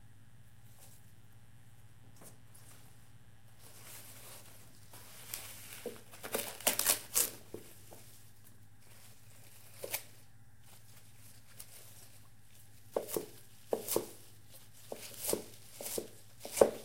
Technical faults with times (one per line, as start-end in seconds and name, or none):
0.00-7.94 mains buzz